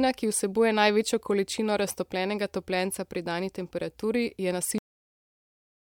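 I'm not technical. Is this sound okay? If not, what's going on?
No. This speech clip has a cut-off end: at 4.78 s it stops mid-sound and drops to dead silence with no fade, because the final stretch was never recorded.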